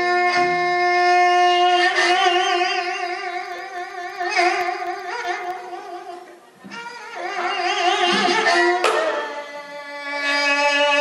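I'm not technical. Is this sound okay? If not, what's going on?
No. From 3.46 to 5.57 s there are periodic USB or driver dropouts: tiny silent gaps every 64 ms, heard as a steady ticking.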